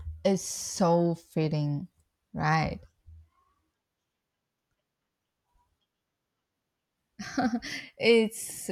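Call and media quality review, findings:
Nothing stood out on listening to this speech clip.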